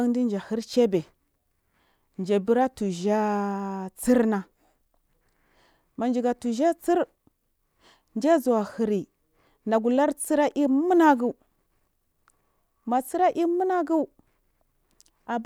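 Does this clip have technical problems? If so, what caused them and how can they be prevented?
No, no technical problems can be heard anywhere in this speech recording. With no fault present, there is nothing here that needs a cause or a preventive step.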